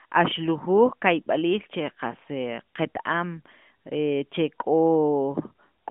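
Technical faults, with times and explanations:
No technical faults detected.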